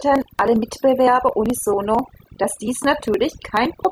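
Throughout the clip, the speech carries overdone noise removal. The noise reduction was set too aggressively, so individual frequency bands that sit close to its noise estimate are pulled far down or switched off entirely, taking the quieter components of the voice with them. The background between phrases drops away, broken by twinkling specks where isolated bands flicker on and off.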